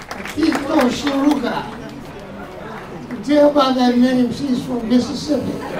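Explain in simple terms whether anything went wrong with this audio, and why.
GSM signalling bursts, from 4.47 to 5.29 s: a nearby 2G mobile phone was exchanging short bursts of radio signal with its network, as it does before a call or message comes in. The recording equipment picked up those radio pulses and turned them into sound, so you hear a galloping dit-dit-dit of short buzzes at 217 Hz, sitting quieter than the main sound.

GSM phone buzz, from 5.30 to 5.76 s: a phone then went into a call and began transmitting continuously in pulses 217 times a second. The audio circuit rectified those pulses into a steady, harsh, raspy buzz at 217 Hz, full of higher overtones and unrelated to the recorded sound. It stays below the main sound in loudness and lasts until just before the end.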